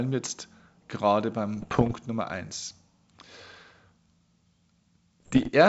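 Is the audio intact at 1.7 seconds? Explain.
No. Bit errors on the ADPCM link span 1.57 to 1.95 s. Flipped bits derail the decoder's step size and predictor, causing pops, rough bursts and brief level jumps.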